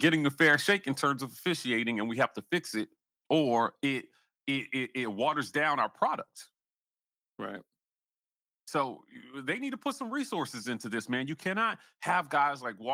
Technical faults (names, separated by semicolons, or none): microphone volume stepped down